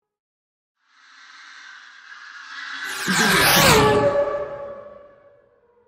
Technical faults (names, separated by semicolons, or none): MP3 compression